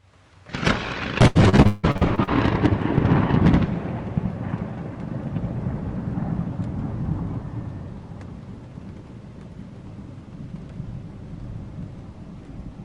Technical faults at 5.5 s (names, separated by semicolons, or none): none